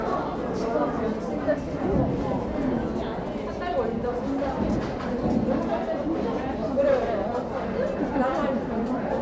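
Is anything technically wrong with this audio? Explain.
No, nothing here sounds technically wrong; this is simply the sound as it was captured, with no problems worth pointing out.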